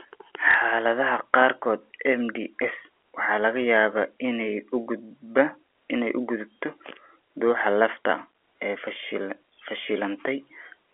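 At 0.51 to 0.54 s, a gap in the incoming audio stream, pointing to a single lost packet, was filled by packet loss with the last packet repeated: the receiver replayed the previous 30 ms of speech instead of going silent. The segment comes across as a small blip over the band-limited G.711 telephone sound.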